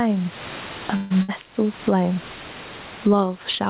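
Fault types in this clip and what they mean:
Gain pumping: Throughout the clip the level breathes, with a swing of around 15 dB. Loud and quiet passages sit unnaturally close together, giving a squashed, pressed quality. The likely cause is an input gain set far too high, with a fast limiter or compressor repeatedly pulling it back on every peak and releasing it in the gaps.
Call audio freeze: From 0.96 to 1.12 s the sound stops moving forward. The last fragment is stretched into a decaying sound for about 143 ms and never drops to full silence. When the audio resumes it continues exactly where it left off, so nothing is lost, but the rest of the clip now runs about 143 ms late. This is likely a stall in packet delivery that let the receive buffer run dry.
Burst of packet loss: Between 1.22 and 1.30 s the receiver has no data and fills roughly 60 ms with a fading continuation of the preceding sound. 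When the audio returns it has jumped ahead. About 60 ms of speech is simply gone, leaving a small audible skip instead of the held-then-resume pattern of the earlier freeze. This fits a short run of consecutive packets that were lost or arrived too late to be played.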